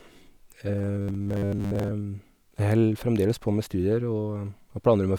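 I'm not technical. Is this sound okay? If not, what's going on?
No. From about 0.79 to 1.92 s the speech turns into a stiff, metallic buzz: robotic sound from repeated short buffers. New audio likely arrived too slowly, so tiny 10 ms slices got replayed for most of that stretch, forcing a fixed 100 Hz drone.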